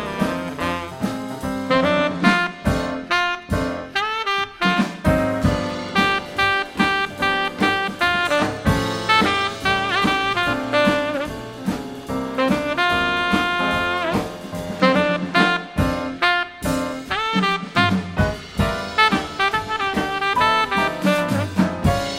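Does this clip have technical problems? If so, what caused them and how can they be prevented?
No, this clip has no technical problems, so there is nothing to trace or prevent.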